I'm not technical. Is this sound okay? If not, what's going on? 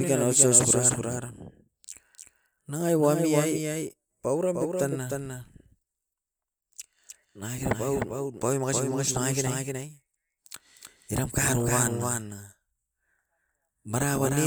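No. A doubled audio track runs throughout: the speech was likely recorded twice, so a quieter copy trails about a third of a second behind, like a flat echo.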